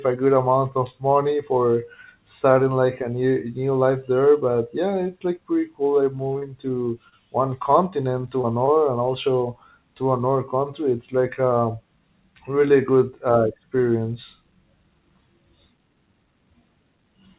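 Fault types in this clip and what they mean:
Short concealed packet loss: Six 20 ms gaps occur between 6.3 and 8.7 s. Each is patched by extending the preceding sound, leaving a brief smear.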